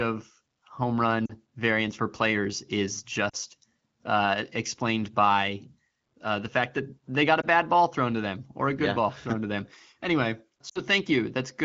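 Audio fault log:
1.26–1.33 s, 3.29–3.36 s, 7.41–7.45 s and 10.69–10.81 s, lost AMR speech frames: the decoder holds its last good pitch and vocal tract settings at falling gain. The single 20 ms loss gives a quick dip or warble, while the runs of about 40, 40 and 60 ms drop to near silence within two frames, fitting one to three lost frames. The 7.41 s one sits between "that they got a" and "bad ball thrown to".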